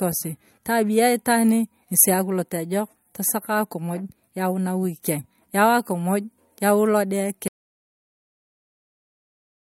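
At 7.48 s, right after "yau akumuj yau lode", the speech cuts off into an audio dropout to silence that runs to the end. The gap is silent with no room tone, likely a lost input or mute while recording continued.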